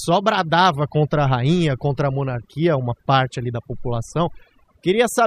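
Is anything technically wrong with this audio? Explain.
Yes. Throughout the speech clip, from start to finish, there is overdone noise removal. A noise reduction process has been pushed too hard on what was a noisy recording. Any frequency band that sits close to the estimated noise level gets cut deeply or muted outright, and the softer components of the speech fall below that threshold and are removed along with the noise. The background drops and breaks up into twinkling, chirpy specks.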